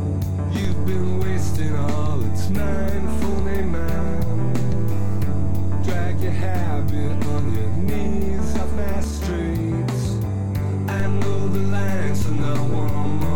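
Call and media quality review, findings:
DC step. Low thumps at 0.65 s, 9.04 s and 11.0 s. Zero line jumps by about -17 dBFS, holds, returns at 9.04 s, then steps again at 11.0 s and holds to the end. Probable converter recalibration or offset input switched in.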